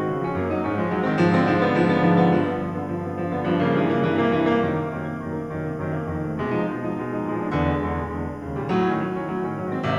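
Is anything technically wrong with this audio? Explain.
Yes. Timecode bleed runs through the whole of this music clip. Linear timecode from a neighbouring track or cable has leaked into the audio, sitting far below the music at around 40 dB down. It is a square wave flipping between pitches near 1 and 2 kHz, and it repeats at 25 frames per second, so it is heard as a faint, steady chirping warble. Unlike a single-pitch whine or tone, its two pitches alternate in a rapid, data-like rhythm.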